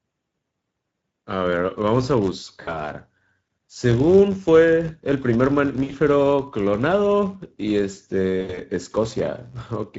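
Filter restarted on every block, running through the whole speech clip: the filter drops its memory at each block boundary and starts from silence, so each block opens with a small transient. These repeat at 93.8 Hz, which fits a 512-sample buffer, and are heard as a steady low buzz riding under the speech. The buzz rises and falls with the level of the talker, louder on strong syllables and nearly gone in pauses.

Speex codec damage is also present throughout and plainly audible. Speex is a CELP coder that models speech as an excitation passed through a vocal-tract filter. The sound points to a setting near 16.8 kbps, where the excitation is coded coarsely. The speech comes across noisy and hoarse.

VoIP packet loss concealed by the speech codec occurs at 2.61 to 2.91 s, covering 60 ms of lost audio. The decoder filled the gap by extending its last pitch and filter with falling gain, so the speech smears into a stretched sound that fades. 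Because each frame builds on the previous one, it stays weak or distorted for tens of milliseconds after packets resume. The same concealment happens at 5.83 to 5.92 s, again over 60 ms lost. At 8.41 to 8.60 s, 100 ms is lost in gaps spread over 160 ms, the longest gap 80 ms.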